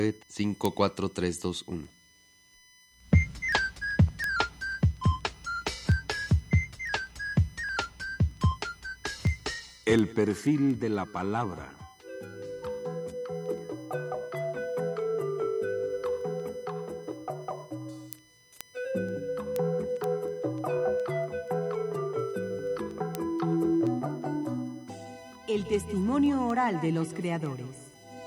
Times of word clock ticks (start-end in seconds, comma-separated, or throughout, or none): 0.18-28.18